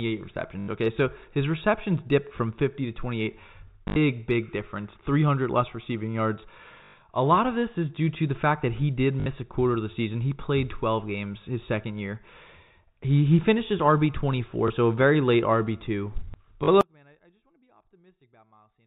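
It's a speech recording over what sounds like a G.711 telephone path, band-limited below 4 kHz, with two kinds of trouble. The first is packet loss with the last packet repeated. At 3.88–3.96 s (80 ms, just before "big difference"), 6.84–6.94 s (100 ms), 9.20–9.26 s (60 ms, between "fact that he did" and "a quarter of the"), 14.68–14.70 s (20 ms, right before "so a very late") and 16.64–16.68 s (40 ms), the receiver filled the hole by replaying the previous chunk. The replays don't line up with the pitch, and the longer runs buzz at about 50 Hz, which fits 20 ms packets. You hear it as a quick robotic stutter. The second is an audio dropout to a faint residue. At 16.81 s the speech cuts out abruptly, not fading, and stays gone to the end of the clip. Only a faint sound remains, about 35 dB below the signal's normal level, so the path after the break stayed live. It's likely the wanted signal was lost before that point.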